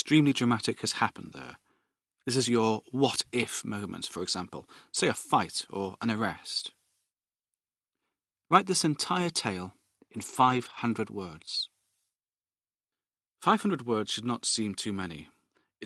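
Lost packets rebuilt from error correction occur at 5.15 s, between "for example say a" and "or an arrest", and from 10.17 to 10.79 s after "this entire tale in". Each missing packet was replaced by the low-bitrate copy carried in the next one, so there is no gap. The 20 ms patch and the 320 ms stretch sound rougher and noisier.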